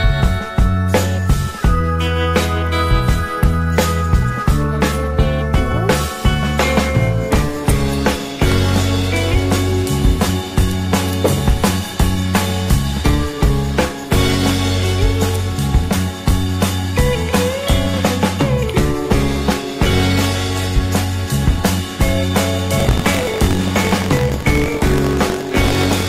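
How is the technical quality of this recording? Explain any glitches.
The recording has one clear technical fault near the end. From 22.76 s to the close there is buffer tearing. The writing and playback sides of the audio buffer have drifted so their positions cross each period, splicing in about a tenth of each block from roughly a tenth of a second earlier. The result is a robotic rattle at about 46.9 Hz, which fits a 1024-sample buffer. A waveform shows regular hard steps, and a spectrogram shows evenly spaced vertical streaks.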